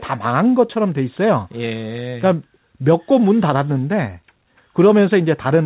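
At 0.74 to 0.77 s the speech has a short concealed packet loss. Around 20 ms of audio failed to arrive at the decoder in time, and the receiver covered the gap by extending the preceding sound for roughly 11 ms before crossfading back into the real signal. The result is a brief smear or wobble where the speech briefly loses definition. The call path's narrowband character, with nothing above 4 kHz, fits the G.711 A-law codec.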